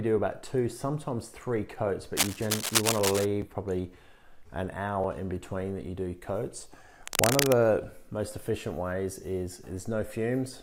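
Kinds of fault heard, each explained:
Cable scratch noise: 2.16 to 3.25 s and 7.07 to 7.54 s, dense uneven scratching roughly as loud as the sound, likely a worn contact being moved.
Repeated buffer: 3.42 s and 5.04 s, a tiny slice replays once with hard joins, heard as a click, which fits a 5 ms buffer.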